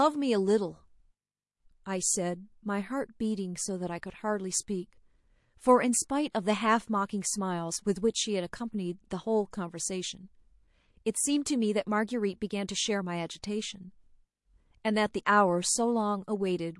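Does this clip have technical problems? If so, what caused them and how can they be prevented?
Yes. Throughout the speech there is a watery, swirling quality, with s sounds turning metallic and chirpy and consonant onsets smeared. This is likely MP3 compression, and the damage suggests a low bitrate of about 48 kbps: short of bits, the encoder drops weak frequency lines that flicker on and off between frames. Encoding at a higher bitrate, or using a more efficient codec, would prevent it.

Pre-echo appears as a brief hiss just before two sharp attacks, one from 6.31 to 6.35 s (about 32 ms) and one at 11.13 s. The noise there rises by about 15 and 17 dB, and both attacks sound softened. The codec spreads its quantisation noise across a whole block of about 48 ms, so noise sized for the loud onset also fills the quiet moment before it. The length of the smear suggests the encoder never switched to short blocks. 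An encoder that switches to short blocks on transients, or a higher bitrate, would prevent it.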